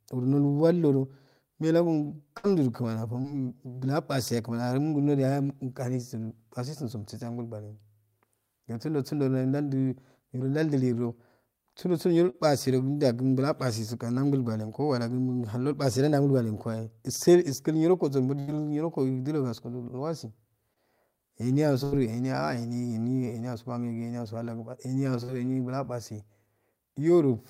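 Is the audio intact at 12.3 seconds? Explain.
No, there's a short concealed packet loss from about 12.30 to 12.36 s. Roughly 40 ms of the call's speech didn't reach the decoder in time, so the receiver carried the last sound forward for 37 ms and blended back, leaving a brief smeared wobble.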